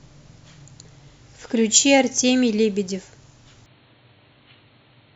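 At 3.66 s the speech abruptly turns dull and boxy and stays that way to the end: nothing above 4.3 kHz survives, the level drops by about 5 dB, and a faint new background hiss appears well beneath the voice. There is no gap at the transition. The likely cause is an input switched to a poorer device. A simple low-pass filter or codec bandwidth drop would narrow the band but would not change the level and noise floor.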